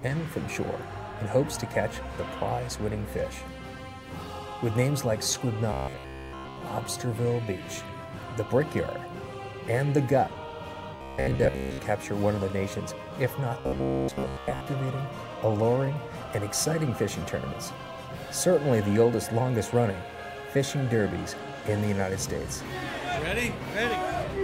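Robotic sound from repeated short buffers shows up three times, at 5.73–6.63 s, 10.96–11.80 s and 13.60–14.67 s, as a rigid metallic buzz near 66.7 Hz, entirely in the first stretch and mostly in the later two, likely from a roughly 15 ms chunk looping while fresh audio was late.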